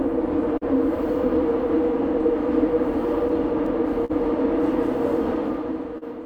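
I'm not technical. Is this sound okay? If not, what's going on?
No. The sound has timing problems from being sent over a network.

Clock drift between sender and receiver runs through the whole clip. The device sending the audio keeps time a few percent slower than the device playing it, so the playback keeps running short of sound and has to pad it out. The effect is small timing hiccups at uneven intervals rather than one obvious glitch.

Repeated timing corrections happen from 1.64 to 4.02 s. To stay in step with the slow sender, the player keeps slipping in tiny repeated slivers of sound, which together add about 40 milliseconds and play that stretch at about 99% speed. You may hear a slightly unsteady, dragging tempo or faint stutters.

A short stall from a late packet happens three times: 0.57 to 0.63 s (41 ms), 4.05 to 4.11 s (44 ms), and 5.98 to 6.04 s (38 ms). Each time, a chunk of audio arrived late. 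The player held the last bit of sound until it came, then carried on from the same spot. Nothing is lost, but the sound briefly hangs, with a slight buzz or dip.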